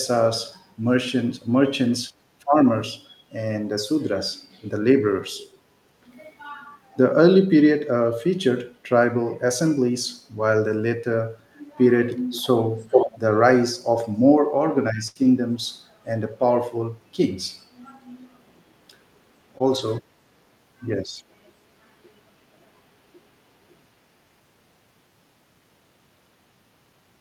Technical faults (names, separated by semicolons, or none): echo leak; burst of packet loss; short concealed packet loss